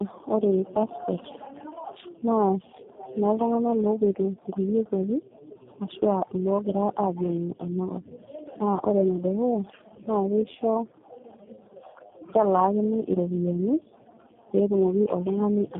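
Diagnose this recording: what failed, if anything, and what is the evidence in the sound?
The speech sounds rough, muffled and warbly for the whole recording, and nothing is heard above about 3.7 kHz. This is tandem speech coding at the codec stage. The call crossed several network borders and was decoded and re-encoded at each one. The texture fits three low-rate speech coders in a row: an AMR-NB stage near 5.9 kbit/s, then two G.729A stages at 8 kbit/s, with G.711 mu-law links in between. Each coder worked on its predecessor's already damaged output, so the losses piled up.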